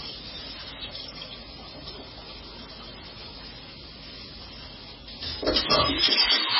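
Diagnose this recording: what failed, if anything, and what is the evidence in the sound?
Codec stage, likely heavy MP3 compression: nothing above 5.5 kHz throughout, with watery, swirly smearing. That points to a very low bitrate, around 15 kbps.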